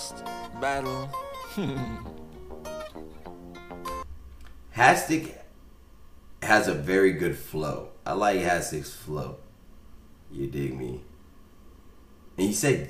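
No technical faults can be heard anywhere in this audio.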